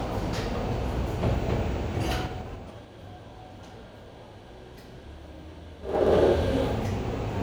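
From 2.05 to 2.90 s the level drops about 20 dB in coarse 3 dB steps, and each unsmoothed jump ticks audibly. Zipper noise returns, faster, as it climbs back from 5.80 to 6.14 s.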